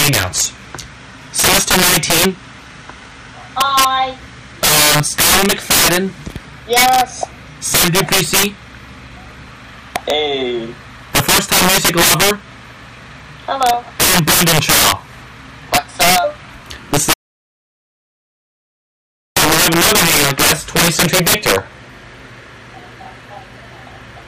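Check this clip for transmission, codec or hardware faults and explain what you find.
Two faults are present: an integer overflow affecting loud passages throughout, and a complete dropout to silence in the second half.

Integer overflow, throughout: gain pushed levels about 18 dB past full scale, so peaks wrap to the opposite sign, producing violent cracks on loud moments, harsher than clipping.

Audio dropout to silence, 17.13 to 19.36 s: the sound cuts to dead digital silence for 2.23 s with no room tone, likely from lost input while recording continued writing zeros.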